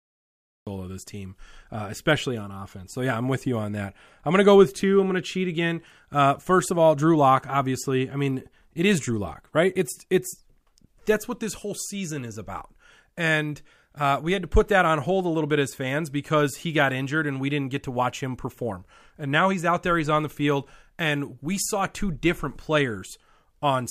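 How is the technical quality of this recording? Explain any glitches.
The recording has one glitch, a cut-off start. From 0 to 0.67 s there is digital silence, and at 0.67 s the speech enters abruptly, already mid-sound, with no natural attack or fade-in. The capture began late, so the opening of the utterance was never recorded. On a waveform this shows as a flat line that jumps straight to the speech waveform. On a spectrogram it is a blank region ending in a sharp vertical edge.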